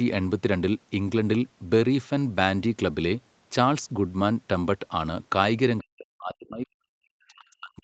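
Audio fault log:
5.8–7.83 s: speech suppressed in double talk. The speech drops by roughly 40 dB at its deepest, likely from an echo canceller that turned down both its own talker and the loudspeaker echo during simultaneous talk. The waveform shrinks at the dip, and the spectrogram fades below its 8 kHz ceiling.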